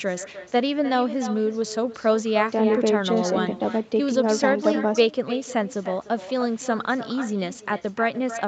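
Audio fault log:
Throughout: echo with no canceller. The far end's loudspeaker feeds its microphone and nothing subtracts it, so every phrase returns about a third of a second later, about 13 dB down and band-limited near 8 kHz. On a waveform each syllable burst trails a smaller duplicate; a spectrogram shows faint repeated harmonic patterns offset in time.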